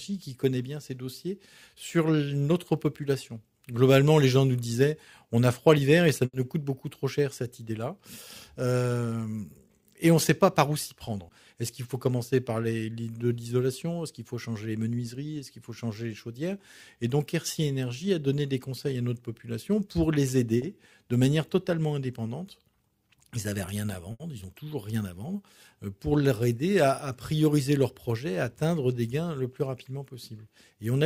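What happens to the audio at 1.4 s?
Nothing goes wrong at 1.4 s; the audio plays through that moment intact, with no dropout, click or other fault.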